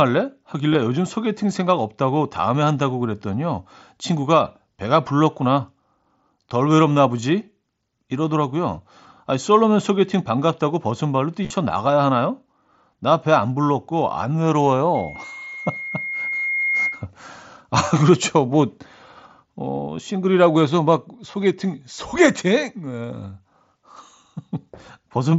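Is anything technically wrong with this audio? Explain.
Yes. Concealed Bluetooth headset packet loss occurs at 0.73, 16.85 and 21.32 s, with a scattered burst from 11.43 to 11.53 s. Lost headset packets are filled by repeating recent waveform. Brief buzzy patches result.

A loudspeaker feedback squeal runs from 14.95 to 17.06 s. The microphone re-amplifies the loudspeaker at 2.1 kHz. That tone swells over about two seconds, reaching roughly the speech level.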